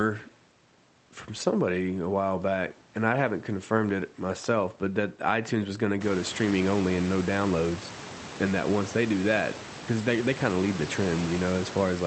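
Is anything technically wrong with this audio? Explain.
No, nothing stood out as technically wrong on listening to this speech recording.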